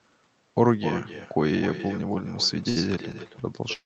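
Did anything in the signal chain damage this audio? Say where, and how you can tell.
Yes. The first fault is an echo with no canceller, in call processing at the far end. Throughout, every phrase is shadowed roughly a third of a second later by a copy about 11 dB quieter and thinner. The far side's loudspeaker fed its microphone and nothing subtracted it. On a spectrogram each syllable's harmonic pattern repeats, fainter, at that fixed lag. The waveform shows low ghost bursts trailing each onset.

The second fault is a short stall from a late packet, at the network and jitter buffer stage, from 2.69 to 2.78 s. The buffer ran dry, so the receiver held the last sound for about 67 ms and then resumed where it left off. Nothing is lost, but everything after is pushed later. It shows as a frozen, smeared stretch of repeated spectral texture with a slight buzz or dip. The call codec's band limit near 8 kHz is visible across the clip.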